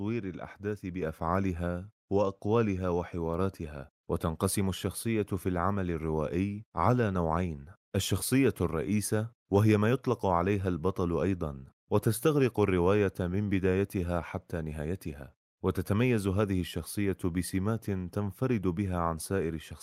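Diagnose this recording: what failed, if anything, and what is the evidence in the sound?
The failure sits in call processing: the microphone volume stepped up. At 1.02 s the whole level jumps by about 5 dB in a single step, and the room background rises right along with the speech. That shared jump is the giveaway. The software's level control decided the input was too quiet and raised the device gain in one move instead of ramping, so everything after that point is simply louder.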